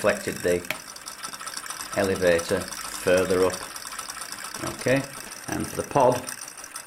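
From 4.56 to 5.75 s, GSM signalling bursts intrude. The circuit rectifies a nearby 2G phone's radio pulses. Galloping 217 Hz buzzes sit well under the sound.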